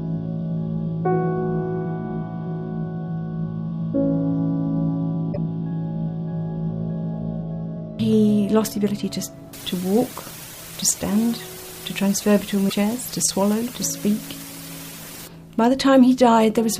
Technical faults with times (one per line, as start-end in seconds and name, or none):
5.29-5.37 damaged data in a compressed stream
9.53-15.27 low bit depth with dither
12.66-12.73 damaged data in a compressed stream